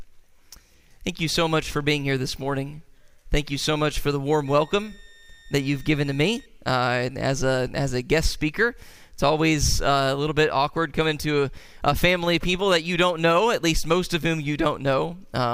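From 4.46 to 6.46 s a faint high whistle near 1.8 kHz drifts slightly in pitch, well below the main sound: a switching supply whistle from a power converter cycling audibly.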